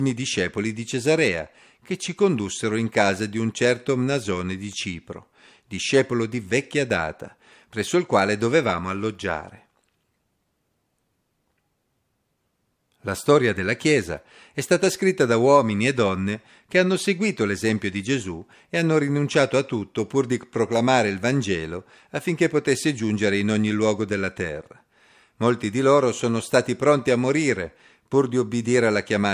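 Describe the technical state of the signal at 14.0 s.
At 14.0 s the speech signal is intact, with no audible fault at that moment.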